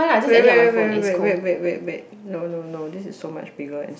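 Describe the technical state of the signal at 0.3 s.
At 0.3 s the speech signal is intact, with no audible technical fault at that moment.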